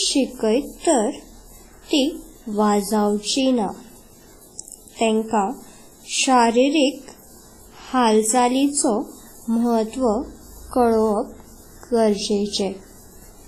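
Throughout the speech, the sound is washy and ringing, with a hiss that breathes with the signal. Nothing is heard above 15.3 kHz. The likely cause is heavy WMA compression at a low bitrate, near 24 kbps, smearing quantisation noise in time.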